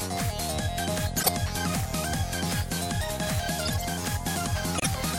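Between 1.17 and 1.29 s, and again between 3.65 and 3.86 s, brief chirping bursts of noise land at the wrong frequencies. The first is loud and the second quieter. This is corrupt frame decoded: damaged compressed frames were played anyway, so misread codes and gains scattered energy across the spectrum. At 4.78 s the sound cuts abruptly to a 0.09 s silence, about three frame lengths. This is corrupt frame muted: the decoder rejected damaged frames, and the player substituted silence without disturbing the timing.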